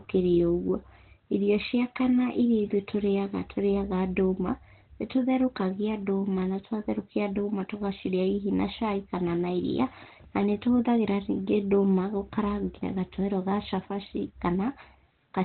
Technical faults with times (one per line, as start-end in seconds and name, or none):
0.00-15.44 Opus compression